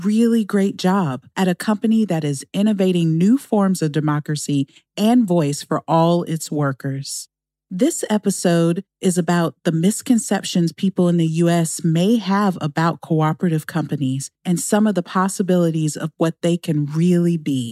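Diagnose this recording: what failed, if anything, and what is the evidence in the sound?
No faults detected here.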